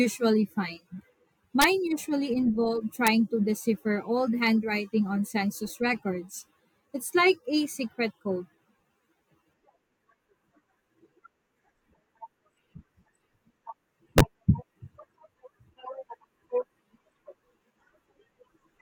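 A speech clip with integer overflow cracks at 1.62–1.64 s, 3.07 s and 14.18–14.21 s. Peaks about 4, 0 and 3 dB over full scale wrap to opposite sign, not clipping.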